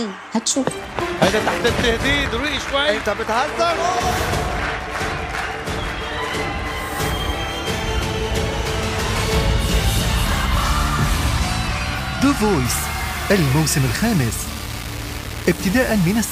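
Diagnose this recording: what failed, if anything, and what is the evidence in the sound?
From 12.65 s to the end at 16.32 s, the sound turns grainy and harsh, a case of low bit depth without dither. The grit rises and falls with the material. It is loudest relative to the quietest passages. The error sits only around 15 dB below the signal. The likely cause is a sample-format conversion that rounded to about 5 bits with no dither. Without dither, the error tracks the signal as distortion rather than steady hiss.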